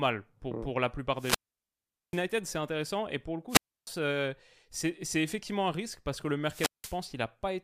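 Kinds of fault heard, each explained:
Wireless microphone squelch dropout: the radio link fades until the receiver's squelch mutes output, so the speech falls to near silence three times, for about 790, 300 and 180 ms.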